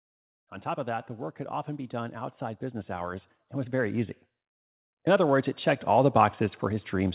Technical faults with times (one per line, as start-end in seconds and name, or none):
1.90-4.20 automatic gain rising
5.04-7.15 automatic gain rising